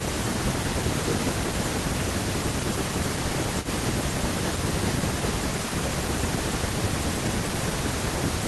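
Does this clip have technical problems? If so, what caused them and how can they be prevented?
Yes. An echo leak appears from 3.62 to 3.68 s: a faint, delayed copy of the speech, about 0.3 s late and about 15 dB below it. The likely cause is a far-end loudspeaker whose echo canceller let part of the microphone pickup return. Using a headset or a better-tuned echo canceller on that end would prevent it.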